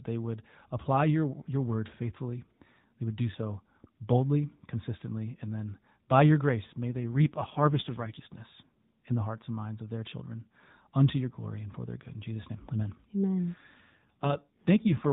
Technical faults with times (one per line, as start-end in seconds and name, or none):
6.89-8.43 AMR rate drop
13.54-15.11 AMR rate drop